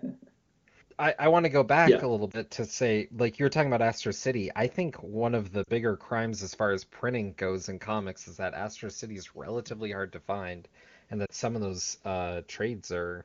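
Lost AMR speech frames occur at 2.32–2.39 s, 5.63–5.70 s and 11.26–11.30 s. Corrupted frames failed their checksum, so the AMR-WB decoder reused the last good pitch and vocal tract settings at falling gain. The first gap fits one 20 ms frame and gives a brief dip or warble. The later two fit two frames each and sink toward near silence, after which speech returns weak or rough.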